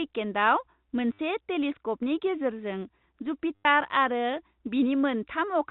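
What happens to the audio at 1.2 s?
Just before 1.2 s, from 1.13 to 1.19 s, packet loss with the last packet repeated replays one fragment for about 60 ms. It gives a buzzy stutter, which fits 10 ms packets, rather than the silent gap of a plain dropout.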